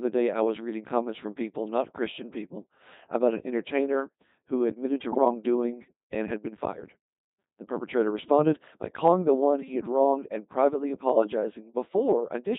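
A speech recording carried through the Codec 2 vocoder at 2.4 kbit/s, with heavy damage throughout. The decoder rebuilds the voice from sine waves driven by pitch, voicing, energy and a coarse spectral envelope rather than keeping the waveform. That gives the whole clip a robotic, buzzy character and smears anything that does not fit a single-voice model. From 5.12 to 5.25 s, just after "entertainer who admitted to", bit errors on digital voice radio strike. At a bit error rate of roughly 7 percent, the flipped bits corrupt the parameters of several frames, which fits around five vocoder frames being hit. Over that span the synthetic voice lurches in pitch, level and timbre, breaking into a brief warbling, bleepy burst of robotic gibberish before decoding recovers.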